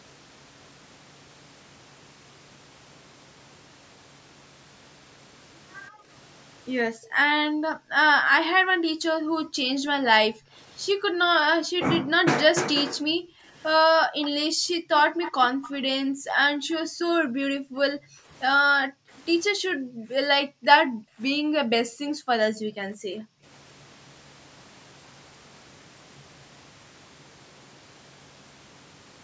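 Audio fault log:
5.90–6.08 s, 6.85–12.13 s and 12.95–23.45 s, background gated by the echo canceller: the room sound behind the speech sinks away and comes back. The first dip is short, about 20 dB deep and lasting a fraction of a second. The later two cut it by up to about 40 dB, leaving roughly 4 s and 7 s of near-silent background in total. While the far end played through a loudspeaker, the echo canceller clamped the microphone hard, then released it.
14.22–14.30 s and 15.21–15.69 s, echo leak: a faint delayed copy of the speech trails the original by 180 ms. It is a brief scrap the first time, some 20 dB below the speech, and a longer, slightly stronger stretch, about 15 dB down, the second time. The likely cause is that the echo canceller at the loudspeaker end failed to strip out everything its microphone picked up from the speaker, so a residue of the voice was sent back down the call.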